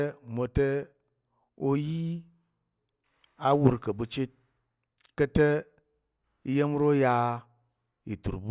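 Nothing in the speech stood out as a technical problem on listening.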